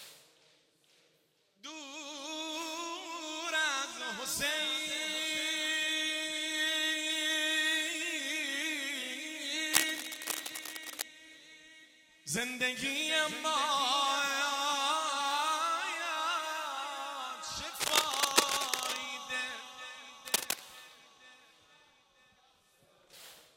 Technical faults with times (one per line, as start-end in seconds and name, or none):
9.73-11.02 cable scratch noise
17.76-18.97 cable scratch noise
20.27-20.60 cable scratch noise